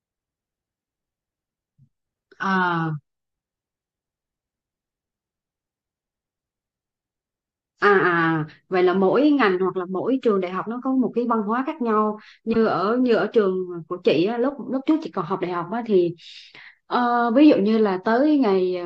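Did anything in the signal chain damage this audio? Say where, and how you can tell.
Yes. The damage happened at the codec stage, on decode. A corrupt frame was decoded and played from 12.53 to 12.56 s. It is a short blip in the speech, about 30 ms long. The blip peaks near -10 dBFS and doesn't belong to the voice around it. The length fits a single compressed frame. Flipped bits in that frame scrambled its gains or coded values. The decoder still rendered it, placing energy at the wrong frequencies.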